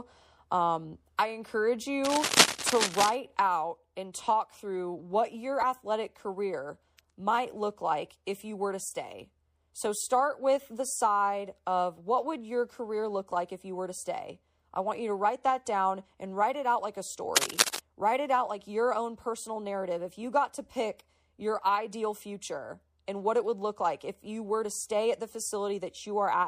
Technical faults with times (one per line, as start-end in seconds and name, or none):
0.00-26.48 MP3 compression
2.05-3.15 cable scratch noise
5.61-5.64 corrupt frame decoded
8.89-8.92 corrupt frame decoded
17.36-17.79 cable scratch noise